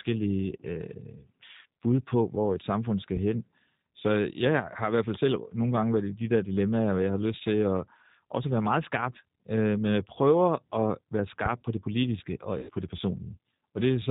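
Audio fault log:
throughout G.729 codec: The audio has passed through a low-rate speech codec of the G.729 kind, which fits an 8 kbit/s VoIP link. Instead of carrying the waveform, it rebuilds each 10 ms frame from a vocal-tract filter, a pitch predictor and a few pulses, and it discards everything above 4 kHz. The result is plainly audible: the speech sounds dull and band-limited, with a rough, slightly synthetic buzz on voiced sounds.
11.46–11.64 s phantom power thump: A supply was switched on a live input, and the sudden voltage step passed through the input's coupling capacitors before they settled. That produces a deep, low-frequency thump that dies away in about 41 ms before the speech picks up again with "på det politiske og". It sounds like a dull knock at the mic stage, separate from the speech.
12.59–12.70 s VoIP packet loss concealed by the speech codec: Right after "på det politiske og", about 100 ms of the stream went missing, which fits five consecutive 20 ms packets dropped on the network. 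The decoder filled the gap by repeating its last pitch and filter settings at falling gain. That is heard as a short stretched-out stretch of buzzy tone or coloured noise that fades. The decoder then needs a moment to rebuild its state, so the following "på det" comes back weak or distorted.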